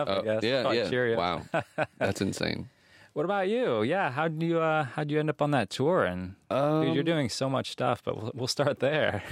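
Speech, with no audible faults.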